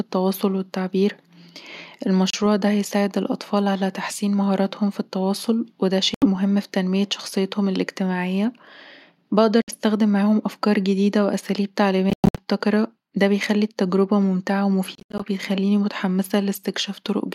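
Silent holes cut the speech at 2.30 s (30 ms, before "ده هيساعد الأطفال على"), 6.14 s (76 ms, after "مهاراتهم في التواصل وده"), 9.62 s (61 ms, before "معاهم أفكار جديدة وأساليب"), and in clustered bursts over 12.10 to 12.43 s and 14.95 to 15.22 s. These are likely Bluetooth dropouts, where late packets were discarded. Unlike a stall, the speech resumes further on rather than picking up where it stopped, so the missing audio is skipped, not delayed.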